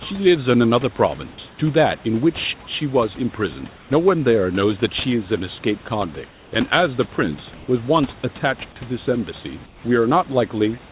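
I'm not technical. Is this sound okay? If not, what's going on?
No. In five short pauses in the speech, at 1.5 to 1.58 s, 3.76 to 3.9 s, 6.3 to 6.52 s, 7.54 to 7.68 s and 9.66 to 9.84 s, the natural hiss of the room briefly turns into a flat, lifeless hush. In most of these gaps it is slightly quieter, and at 7.54 s slightly louder. This is comfort noise in place of the background. The sending side likely stopped transmitting when it heard no talking, and the receiving side filled each gap with artificial noise that only roughly imitates the real room.

Around 1.98 to 2.04 s there is a very faint, brief ghost of the speech, arriving about a third of a second late. This is an echo leak. The likely cause is that the far side was using a loudspeaker, and its microphone picked up the sound coming out of it. The system meant to cancel that echo missed this small scrap, so it came back down the line. 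The call sounds slightly muffled throughout because nothing above 4 kHz gets through, which is how this phone-style call connection normally sounds.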